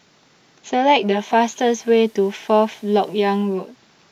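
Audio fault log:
0.92–3.79 s: digital radio blending to analogue. The receiver lost its digital stream and cross-faded over about 465 ms to the FM broadcast, then back. Hiss rises, sitting roughly 35 dB under the speech. Level shifts by about 1 dB.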